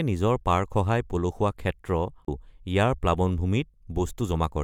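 A short garbled blip breaks into this speech clip from 2.24 to 2.28 s, about 50 ms long. It is damaged data in a compressed stream: corrupted bytes made the decoder misread those frames and lose sync until it found the next valid frame header.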